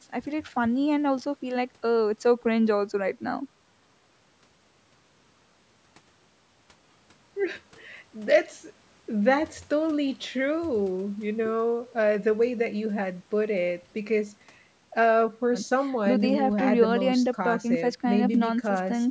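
No technical faults can be heard in the speech; it carries the ordinary character of call microphone processing, with the lowest bass trimmed away and nothing above 8 kHz.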